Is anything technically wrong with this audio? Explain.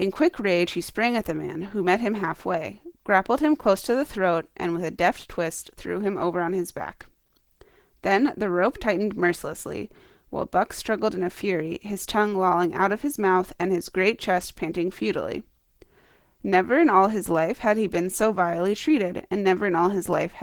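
Yes: throughout, the speech carries Opus compression artefacts, likely from low-rate hybrid-mode encoding fitting about 16 kbps. Its speech-oriented coding leaves voices muffled, hoarse and grainy; a spectrogram shows smeared, noise-filled bands up to 20.1 kHz.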